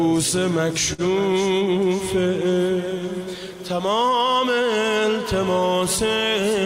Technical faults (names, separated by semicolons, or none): clock drift between sender and receiver; short stall from a late packet; repeated timing corrections